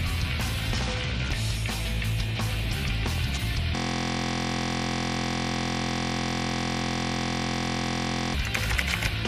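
At 3.76 s the audio locks into a system hang loop and stays stuck until 8.34 s. What you're hearing is the machine or its driver freezing while the sound hardware keeps replaying the last chunk in its ring buffer. That chunk is only 23.22 ms long, which fits a 1024-sample buffer, so it repeats about two hundred times and fuses into a steady buzz at roughly 43 Hz instead of a stutter.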